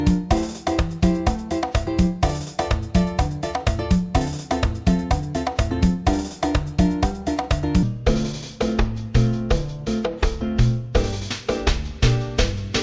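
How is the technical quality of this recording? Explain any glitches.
There's one clear glitch, a wrong sample rate fault in the last stretch. From 7.83 s to the end, everything drops to about two-thirds speed (0.667×) and sinks roughly 7 semitones, so the sound turns low, heavy and dragged out. Speed and pitch move together by the same ratio, which tells you the samples are being played back slower than they were captured, with no rate conversion. That ratio fits 24 kHz material being clocked out at 16 kHz.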